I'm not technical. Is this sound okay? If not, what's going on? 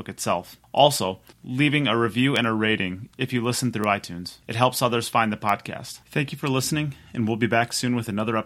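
No. Somewhere in the digital chain, stored bits got flipped, a bit error spike. Each one comes out as a sharp tick unrelated to the speech: at 2.36 s after "leaving a review", at 3.84 s after "rating if you listen", and at 5.49 s after "helps others find the".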